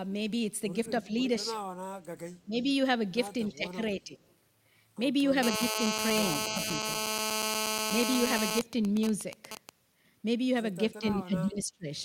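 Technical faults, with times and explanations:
1.02 to 11.88 s, speech suppressed in double talk: The speech level dips briefly at 1.02–1.27, 1.52–1.56, 2.45–2.66, 3.5–3.8, 3.96–4.15, 6.49–6.67 and 10.88–11.88 s. Most dips are about 10 dB. The one at 3.5 s is about 15 dB, and the one at 6.49 s is about 5 dB. The last is the worst, at about 25 dB, with the speech cut in pieces for most of a second. The likely cause is an echo canceller muting its own talker while the far side spoke at the same time.
8.61 to 9.69 s, GSM signalling bursts: An even pattern of ticks with a longer buzz twice a second sits about 10 dB below the speech for roughly a second. It repeats at about 217 Hz, the frame rate of a 2G phone transmitter. The pattern fits a nearby phone in a call while its user stays silent, sending only occasional bursts. The audio circuitry rectifies that radio energy and turns it into audible clicks and short buzzes.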